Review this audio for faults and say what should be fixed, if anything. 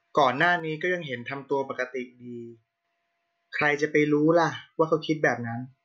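From 0.60 s to 2.85 s the speech suddenly sinks by about 6 dB, then snaps back to full level, and anything carried only on one side vanishes for that stretch. The likely cause is one channel dropping out: with one side of the stereo pair silent, the mono sum receives only half the shared signal, hence the abrupt 6 dB fall. Secure the cabling and monitor both channels with per-channel meters so a lost side is caught during recording.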